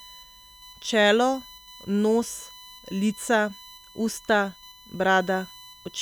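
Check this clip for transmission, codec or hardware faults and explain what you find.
One hardware fault is present: USB whine, running throughout the speech. It is a fixed-pitch tone built on 1 kHz, loudest at its 4 kHz harmonic, about 25 dB below the speech. The USB bus draws current in 1 ms frames, and that pulsing leaks into the audio through power or ground.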